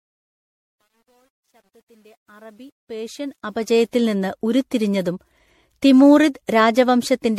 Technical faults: generation loss; truncation distortion on a fade

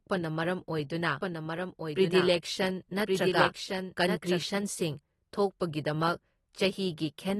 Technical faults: AAC compression; doubled audio track

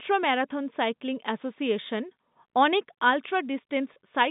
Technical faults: packet loss with pitch repetition

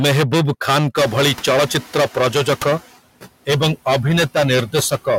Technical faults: hard clipping; noise suppressor artifacts; noise suppressor catching up

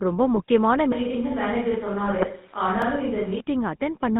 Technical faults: GSM full-rate codec; GSM bit errors; switch to a distant microphone; block of digital silence

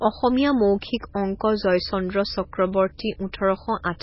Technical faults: MP3 compression

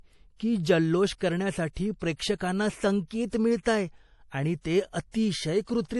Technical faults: MP3 compression

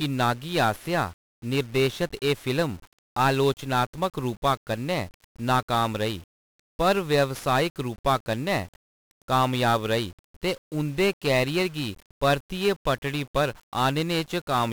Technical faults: 1-bit DFPWM compression

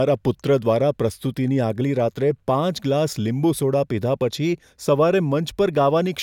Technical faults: none

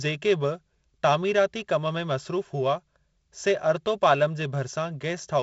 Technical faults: none

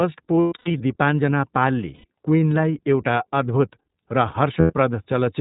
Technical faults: iLBC codec; lost iLBC frames

